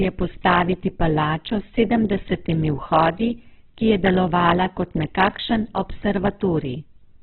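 From start to finish the speech sounds thin, rough and grainy, with nothing above 4.2 kHz and a noisy edge throughout. The likely cause is heavy Opus compression at a very low rate, around 8 kbps, squeezing the audio into narrowband and filling starved bands with noise.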